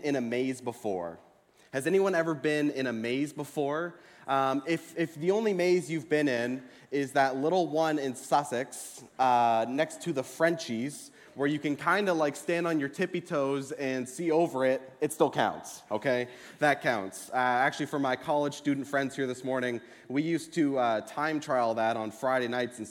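Nothing in the recording stands out as a technical fault, with no dropouts, glitches or other problems turning up anywhere along the way.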